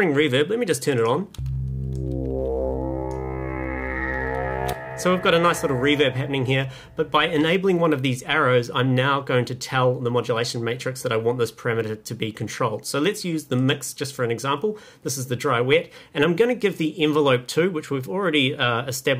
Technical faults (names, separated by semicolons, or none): none